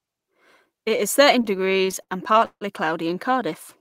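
Between 1.41 and 2.63 s, after "is thirteen" and before "cloudy in", late packets kept draining the jitter buffer, causing repeated stalls (stutter): sixteen gaps, up to 158 ms, were filled by stretching the previous sound, so the speech drags and hiccups without losing anything.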